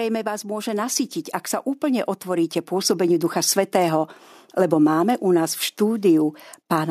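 From 1.8 to 4.19 s, automatic gain rising lifts the whole speech clip by about 5 dB; voice and background swell together, and the waveform envelope and spectrogram brighten gradually.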